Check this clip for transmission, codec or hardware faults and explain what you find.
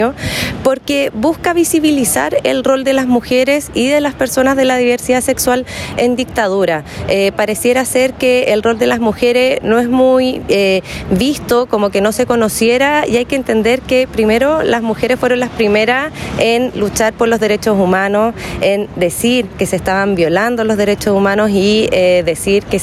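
Gain pumping is present throughout the clip. The gain ducks by around 10 dB under each loud sound, leaving loud and soft passages squashed close together. This is likely caused by the input gain being set far too high, with a fast limiter clamping down on every peak.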